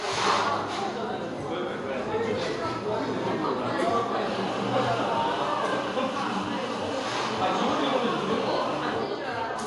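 From start to end the audio carries a hard ceiling at 11.3 kHz, with nothing above it, and a plainly audible watery, swirling texture, most likely from MP3 compression at a low bitrate, something like 48 kbps. Short of bits, the encoder cut the top band at a fixed point and dropped weak frequency lines that flicker in and out between frames. A simple low-pass filter would dull the treble in the same way, but it would not add this shifting, bubbling grain.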